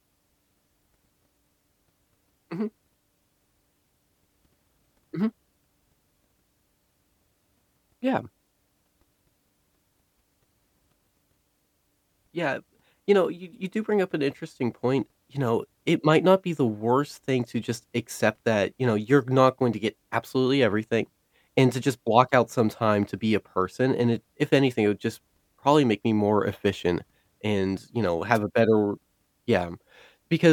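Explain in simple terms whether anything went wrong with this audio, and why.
A brief burst of static, a quick swish lasting only a few hundredths of a second, cuts in from 28.34 to 28.38 s, right after "efficient and you know" and just before "a better". This is a wireless microphone noise hit. The radio link from the microphone weakened for a moment as reflected signals cancelled each other out. The receiver's background hiss then rose and briefly broke through over the speech.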